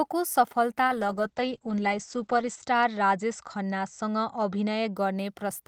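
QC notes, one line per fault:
0.88–5.01 s, call bitrate drop: the call's bandwidth estimate fell and the encoder rate dropped from 32 to 10 kbps, holding at the lowest rate for about 1.7 s before recovering. At that rate the codec quantises the speech far more coarsely, giving a rough, watery texture, and the coded bandwidth narrows from 20 kHz to 8 kHz, so sibilants and upper harmonics are cut off and the speech sounds muffled until the bitrate climbs back.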